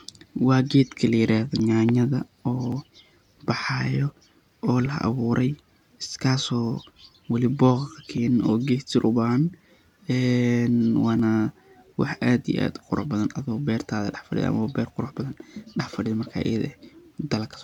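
Samples were likely not collected before the hardware overwrote them, a dropped buffer (overrun), so the speech jumps ahead with no gap at 1.6, 2.72, 4.86, 8.18 and 11.2 s. The loss runs from a few milliseconds to roughly 15 ms.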